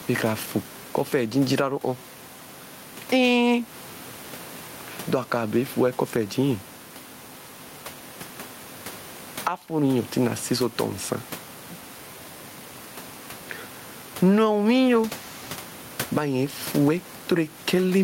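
It's a speech recording with gain pumping all the way through: the room noise, which sits about 29 dB below the speech, swells up in every pause and then ducks as soon as the talker comes back in, with the level swinging by around 10 dB. That breathing effect, plus the squashed, flattened dynamics, points to a likely cause of the mic gain being set far too high, with a fast limiter or compressor clamping down on each loud moment.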